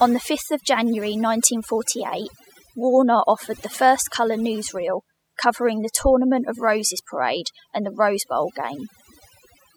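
A speech recording with overdone noise removal running through its whole length. The noise reduction was set too aggressively, so individual frequency bands that sit close to its noise estimate are pulled far down or switched off entirely, taking quieter parts of the voice with them. Between phrases the background drops to near silence scattered with twinkling specks.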